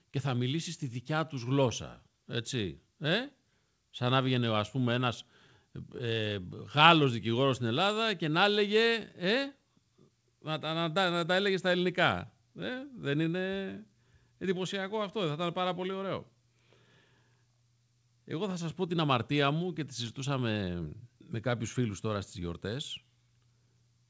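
From 0.12 to 6.01 s, scattered short gaps appear: about seven brief losses, each patched by stretching the preceding sound. They read as isolated ticks or smears rather than a steady tempo wobble. Throughout the clip there is clock drift between sender and receiver, with the sender running roughly 2% slow, so the jitter buffer keeps draining. That shows up from 0.94 to 24.06 s as repeated timing corrections: the receiver keeps inserting short repeated pieces, adding about 0.4 s overall and playing at 98% speed. Unlike loss concealment, these unevenly spaced hiccups all stretch the audio in the same direction. The G.722 call path leaves nothing above 8 kHz.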